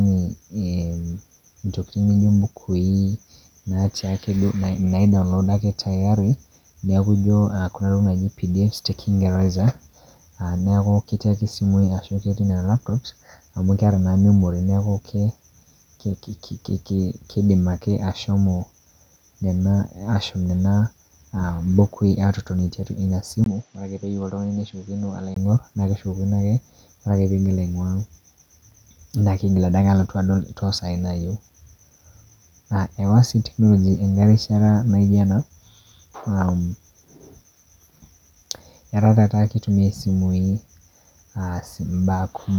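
Speech, with a brief stretch from 23.44 to 25.36 s where the sound turns duller and quieter, most likely because the input switched to a poorer device. A 20 ms gap marks the change at 23.44 s. Nothing above 7.6 kHz gets through, the level falls by roughly 5 dB, and a different background hiss sits about 35 dB under the speech. That new noise floor and the step in level set it apart from a simple bandwidth drop, which would only cut the top end.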